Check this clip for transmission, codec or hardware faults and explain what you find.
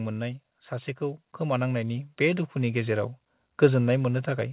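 One fault stands out, heard over a narrowband call path that stops at 4 kHz, which fits G.711 coding.

Automatic gain rising, 0.69 to 2.99 s: the speech and the background noise swell together by about 7 dB over more than two seconds. The automatic gain control judged the input too quiet and raised its gain slowly, lifting everything in the signal at once.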